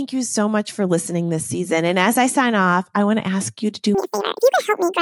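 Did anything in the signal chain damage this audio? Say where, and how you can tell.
Yes: from 3.95 s, just after "ask you to do", speech turns chipmunk-high and double speed, an octave up. Wrong sample rate at playback, consistent with 24 kHz audio played at 48 kHz.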